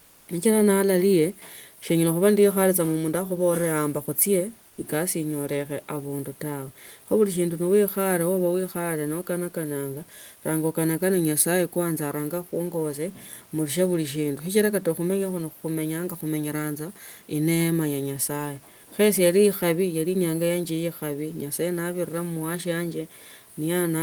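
From 0 to 0.27 s, and again at 4.69 to 4.77 s just before "kasi inyoleche abundu", the room tone goes flat and about 3 to 5 dB quieter: comfort noise in place of the background, likely from Opus DTX.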